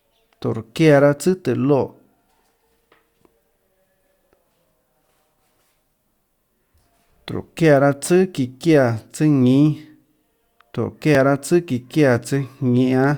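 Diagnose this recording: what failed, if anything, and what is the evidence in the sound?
Overlap between stream segments, at the network and streaming stage: adjacent 2-second segments carry overlapping time stamps, and the player trims speech that was never duplicated. Each trim drops a few milliseconds, so the waveform jumps, giving tiny skips at 1.18, 5.17, 7.16, 9.16 and 11.15 s.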